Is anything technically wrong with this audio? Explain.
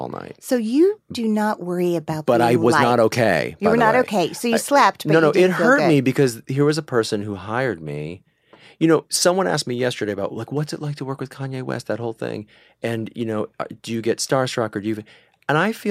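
No, nothing technically wrong stood out on listening to this speech recording.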